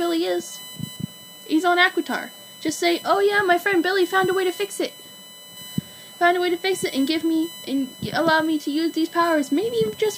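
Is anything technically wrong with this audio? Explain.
Yes. A USB whine runs through the whole clip. It is a steady tone built on 1 kHz, with its strongest component at the third harmonic, 3 kHz, sitting roughly 20 dB below the signal. The cause is the USB bus pulling current in regular 1 ms frames. That periodic load leaks into the audio through shared power or ground, so the whine holds a fixed pitch instead of following the sound.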